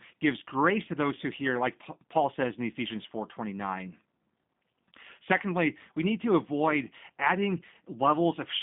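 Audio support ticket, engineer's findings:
G.729 codec (G.729A variant) on the path for the full clip: speech passed through a low-rate parametric coder, consistent with an 8 kbit/s VoIP leg. Band limited to roughly 150 Hz–3.6 kHz, nothing above 3.7 kHz; plainly audible rough, synthetic timbre from model-based resynthesis.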